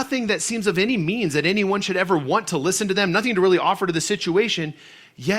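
Speech recording with no technical faults to report.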